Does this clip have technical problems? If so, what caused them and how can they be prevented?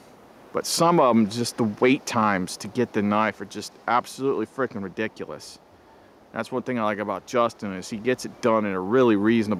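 No, the signal holds steady throughout, with no dropouts, glitches or other technical faults to be heard, so there is nothing here that needs preventing.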